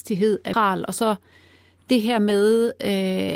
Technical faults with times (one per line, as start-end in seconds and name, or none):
0.53-0.55 skip ahead
1.17-1.39 jitter buffer speed-up